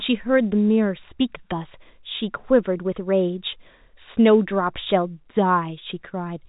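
No faults to report; the speech sits in ordinary G.711 telephone coding with its A-law companding, and nothing is heard above about 3.8 kHz.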